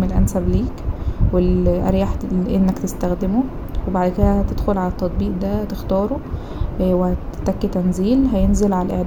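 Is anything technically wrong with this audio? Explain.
No, nothing in this speech recording stood out as a technical problem on listening.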